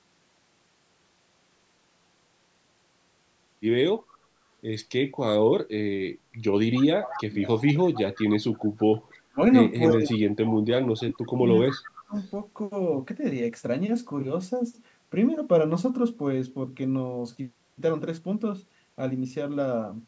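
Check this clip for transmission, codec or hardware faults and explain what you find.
Two call-path faults are present: a leaking echo and suppressed speech during double talk. Both point to loudspeaker echo handling rather than codec or hardware trouble.

Echo leak at 3.99, 6.74–8.22, 8.53–9.35, 9.88–10.12, 10.44–10.58 and 11.68–12.3 s: a copy of the speech trails 290 ms behind, roughly 15 to 30 dB down. The likely cause is a far-end echo canceller missing part of its loudspeaker pickup. The fixed delay distinguishes it from room reverberation.

Speech suppressed in double talk at 9.23–9.41 s and 9.93–12.14 s: the voice dips by up to roughly 35 dB while the echo overlaps. The likely cause is the canceller ducking both its own talker and the echo. It coincides with the echo, unlike random dropouts.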